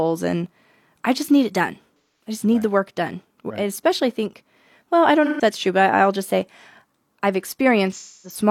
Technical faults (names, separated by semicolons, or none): AAC frame loss with concealment